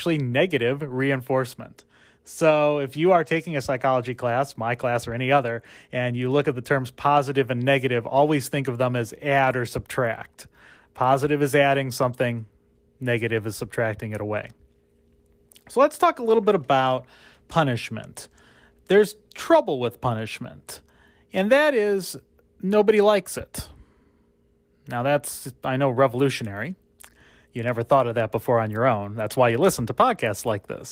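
The speech shows no technical faults, and its Opus voice coding at around 24 kbps in hybrid mode keeps the full audio band.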